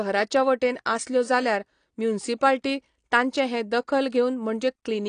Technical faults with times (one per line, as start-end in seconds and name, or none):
0.00-5.09 AAC compression